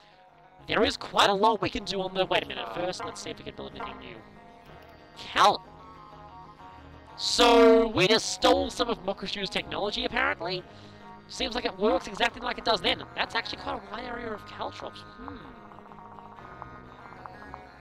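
From start to finish the sound carries a harsh, metallic buzz with extra tones around each note, a ripple near 200 Hz whose level swings by about 60 dB. This is overlap-add ripple: windowed frames were rejoined with an overlap that doesn't sum to constant gain, so loudness dips once every frame.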